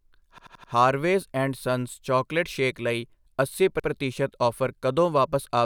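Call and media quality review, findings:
Repeated frames: stutter at 0.38–0.72 s, one 85 ms block replayed four extra times before "ਹਾਰਵੇਜ਼ ਐਂਡ", adding 0.34 s, and again at 3.80–3.88 s after "ਚੌਕਲੇਟ ਸ਼ੇਕ ਲਈ ਅੱਸੀ", one extra play. Cause is in the encoder/transport path, where the same compressed frame was written or sent more than once. Waveform and spectrogram show identical tiled blocks.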